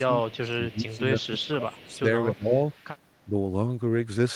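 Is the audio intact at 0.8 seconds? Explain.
No. Around 0.8 seconds the speech is pulled down, by as much as about 20 dB at its deepest, within a stretch of speech suppressed in double talk running from 0.0 to 1.04 s. The likely cause is an echo canceller that, with both sides talking at once, couldn't tell this talker from loudspeaker echo and turned everything down.

Just before that, from 0.68 to 0.76 s, a brief echo leak is heard: a faint copy of the speech about 25 dB below it, arriving 276 ms late. It is likely loudspeaker sound that the echo canceller failed to remove and sent back.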